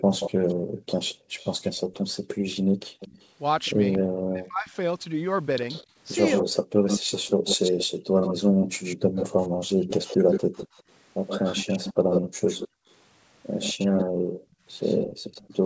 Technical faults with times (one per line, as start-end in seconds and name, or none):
0.00-3.98 echo leak
0.02-1.34 background gated by the echo canceller
2.66-3.00 background gated by the echo canceller
4.23-4.72 speech suppressed in double talk
5.68-15.65 echo leak
6.53-10.29 background gated by the echo canceller
12.22-12.87 background gated by the echo canceller
13.96-15.65 background gated by the echo canceller